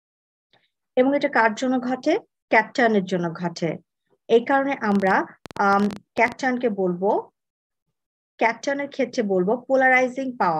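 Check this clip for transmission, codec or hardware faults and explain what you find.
One hardware fault is present: a train of clicks from 4.92 to 6.33 s. About twenty similar pulses arrive at an uneven pace averaging 14.3 per second, peaking roughly 5 dB above the sound. The cause is likely interference or a struggling interface injecting pulses. They are heard as irregular ticking. On a waveform they show as sharp spikes, and on a spectrogram as thin vertical broadband lines.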